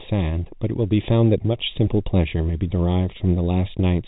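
From the start, channel delay (comb filtering) runs throughout: one channel lags by roughly a third of a millisecond, so the mono sum notches out around 1.5 kHz and sounds hollow. At 3.18 to 3.20 s there's packet loss with pitch repetition, a 20 ms gap, probably a couple of packets, bridged by a repeated pitch period, giving a brief held buzz.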